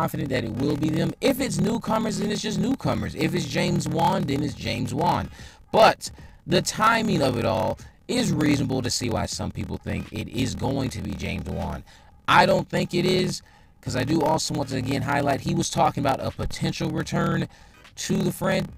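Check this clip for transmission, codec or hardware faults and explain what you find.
There's one fault, present all the way through: a block size mismatch with padding. One stage writes shorter blocks than the next reads, which fits 1024-sample writes. The zero-filled remainder gives a steady 38.3 Hz buzz, and the sound runs slow at 0.889 times speed with roughly unchanged pitch.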